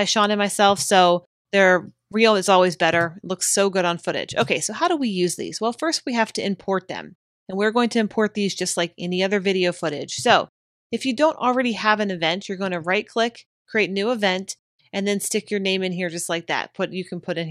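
No technical faults can be heard in this audio. Nothing in it needs correcting.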